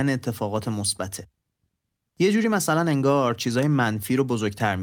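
No technical faults are audible.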